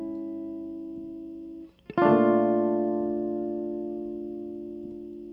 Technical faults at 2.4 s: none

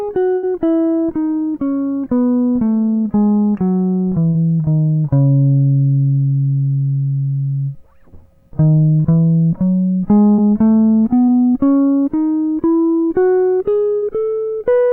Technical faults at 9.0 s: short concealed packet loss

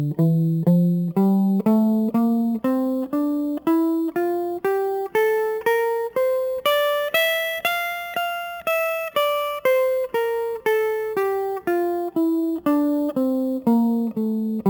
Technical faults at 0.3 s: imaging from sample-and-hold upsampling

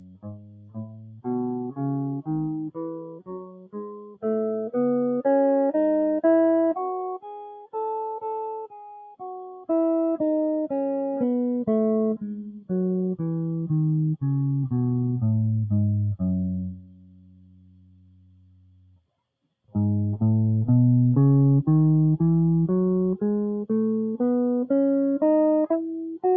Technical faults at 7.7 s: noise suppressor applied to music or sounds; sound cut by the noise suppressor

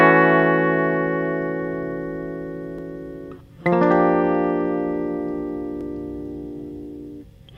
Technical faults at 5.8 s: overlapping chunks

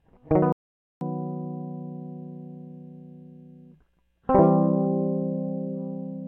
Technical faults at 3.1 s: none

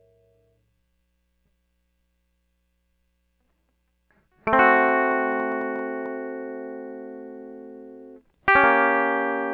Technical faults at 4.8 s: train of clicks

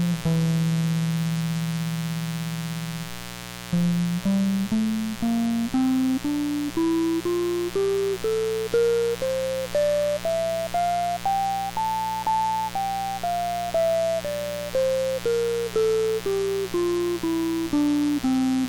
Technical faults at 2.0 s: mains buzz

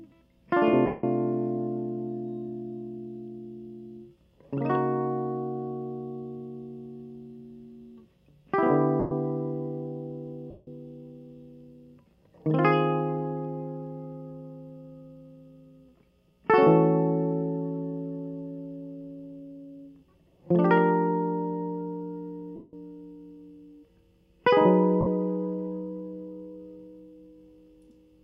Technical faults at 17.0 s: none

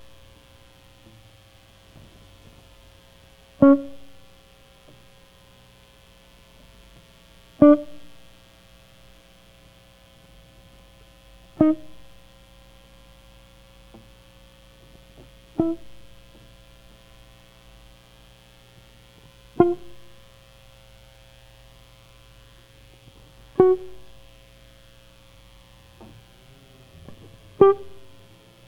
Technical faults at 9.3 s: mains buzz

